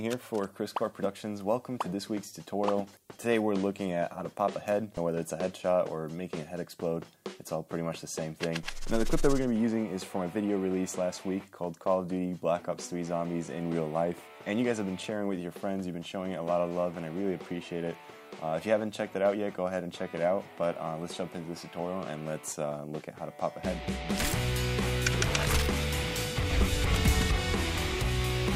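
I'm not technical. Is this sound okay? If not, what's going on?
Yes, it sounds fine, and nothing stood out as wrong when listening to it.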